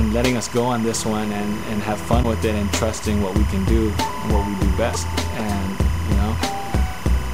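From the start and all the way through, there's timecode bleed: a chirpy warble sitting roughly 15 dB under the sound, flipping between tones around 1 and 2 kHz. That's linear timecode at 25 frames per second leaking in from a neighbouring track or cable.

Then at 2.22 to 2.25 s and again at 4.93 to 4.96 s, the audio lurches forward with a brief glitch lasting about one 24 ms frame. That's likely a broken MP3 bit reservoir: frames were dropped, so the next frame reached back for borrowed data and decoded someone else's bytes.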